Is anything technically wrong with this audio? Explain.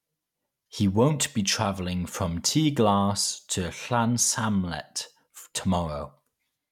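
No, no technical faults detected.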